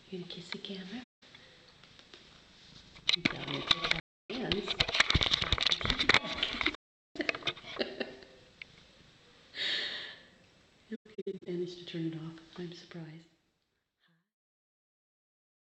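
AAC frame loss with muting at 1.03–1.23 s, 4.00–4.30 s, 6.75–7.16 s and 10.95–11.47 s: lost frames were zeroed, so overlapping windows fade the audio into soft-edged silent holes. The last dropout is broken into shorter gaps, the longest about a tenth of a second.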